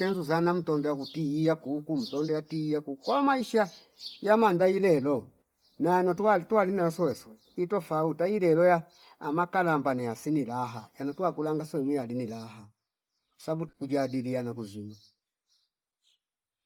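Bluetooth LC3 compression runs through the whole speech clip, with heavy damage that likely comes from this transform codec. Its upper spectrum is coarsely quantised and refilled with noise, giving a breathy, grainy edge, consistent with roughly 32 kbps and 10 ms frames, and nothing sits above 20.2 kHz.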